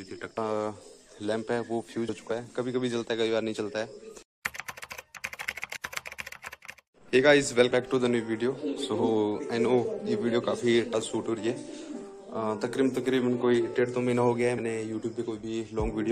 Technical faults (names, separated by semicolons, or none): damaged data in a compressed stream